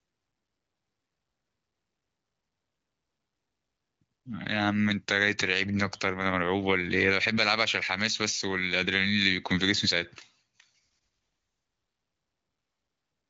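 Nothing goes wrong anywhere in this speech, which comes across as ordinary AMR wideband (HD Voice) audio at 18.25 kbit/s, with the top end stopping around 7.4 kHz just as that codec's band limit would have it.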